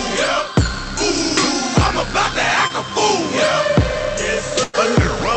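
From 2.67 to 2.72 s there is a short concealed packet loss: about 20 ms never arrived and was filled by extending the preceding sound, heard as a brief smear, with a vertical seam in the spectrogram.

At 4.64 to 4.75 s a burst of packet loss removes about 100 ms. The concealment holds the last sound as a fading buzz or hiss. The waveform shows a tapering envelope, and the spectrogram shows frozen, flat bands before the audio jumps ahead. Throughout, the Opus call path caps content near 8 kHz.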